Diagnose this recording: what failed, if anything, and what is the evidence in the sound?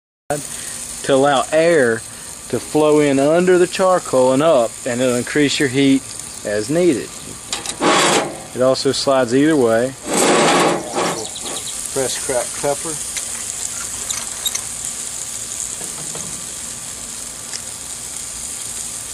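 Cut-off start, 0.00 to 0.30 s: the file opens on digital silence, and at 0.30 s the sound appears abruptly in the middle of an event, with no attack or fade-in leading up to it. The failure sits at the capture or recording-start stage, where the recording began late. The recording missed the onset of a sound already under way, and the missing stretch was filled with silence.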